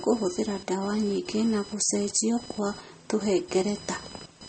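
Computer activity noise runs throughout, a whine of roughly a thousand pulses a second, about 20 dB below the speech; it follows the machine's load rather than the speech, unlike hum. The speech also sounds watery and swirly, with nothing above 8.4 kHz, pointing to heavy compression, likely MP3 at a low bitrate such as 32 kbps, rather than simple filtering.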